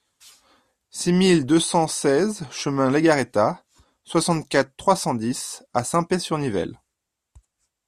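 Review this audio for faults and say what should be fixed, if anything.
Nothing here needs fixing; I listened through this speech recording and didn't hear any technical problem worth flagging.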